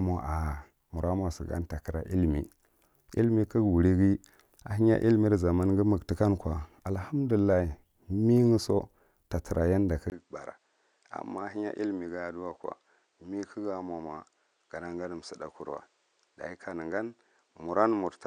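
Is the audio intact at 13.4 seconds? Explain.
No. At 13.4 s you're inside a stretch running from 10.1 s to the end where the sound has dulled, and the likely cause is the input switching to a poorer device. A 20 ms gap at 10.1 s marks the changeover. After it, nothing above 9.3 kHz, so the speech loses its air. It drops around 10 dB, and a new faint noise floor, roughly 40 dB down, sits underneath. That's what a narrower, poorer mic path sounds like.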